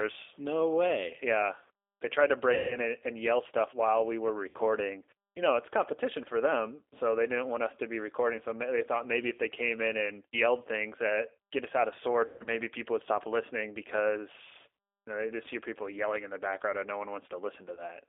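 Throughout the speech, the G.729 codec is plainly audible. It rebuilds the signal at 8 kbit/s from a filter, a pitch predictor and a few pulses per frame. The line passes roughly 300 to 3600 Hz, so the sound is narrow, rough and slightly synthetic.

VoIP packet loss concealed by the speech codec occurs four times. The decoder repeats its last pitch and filter and lowers the gain. The gaps fall at 2.54 to 2.78 s (160 ms, consistent with eight 20 ms packets), 4.49 to 4.58 s (60 ms), 12.26 to 12.49 s (160 ms, in runs up to 140 ms), and 17.75 s (20 ms). Each becomes a fading buzz or smeared tone.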